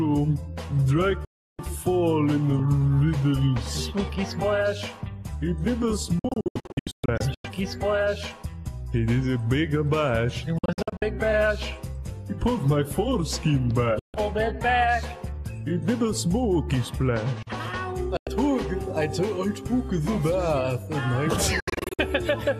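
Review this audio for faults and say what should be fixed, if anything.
Digital broadcast dropout at 1.25–1.59, 6.19–7.45, 10.58–11.02, 13.99–14.14, 18.17–18.27 and 21.6–21.99 s. The receiver loses frames and mutes with a roughly 3 ms fade. Some are scattered holes. Boost signal margin or add error protection.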